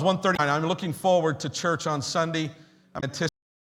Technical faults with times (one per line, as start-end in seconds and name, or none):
0.33-0.40 damaged data in a compressed stream
2.97-3.04 damaged data in a compressed stream
3.29-3.76 cut-off end